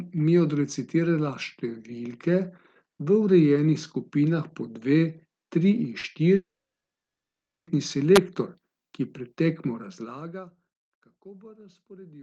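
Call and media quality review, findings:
Short concealed packet loss, 5.99–6.06 s: brief smear in the speech as about 40 ms goes missing. Decoder continues the last sound, then crossfades back. Spectrogram shows the last sound held briefly; waveform shows no gap.

Gap at 6.35–7.70 s: speech trails into a fading fill, then about 1.2 s of silence before resuming with material lost. Likely long network dropout: jitter buffer starved, concealment decayed to nothing. Spectrogram shows a smeared tail, then a blank band; waveform flatlines.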